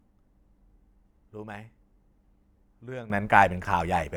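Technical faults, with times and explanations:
3.1 to 4.16 s, sudden gain jump: the speech and the background noise rise together by about 15 dB in a single step and stay there to the end, with no fade. The likely cause is a digital gain setting or bit shift applied between one sample and the next. On the waveform the envelope widens abruptly at 3.1 s, and on the spectrogram every frequency band, including the noise floor between phrases, brightens at once along a sharp vertical edge.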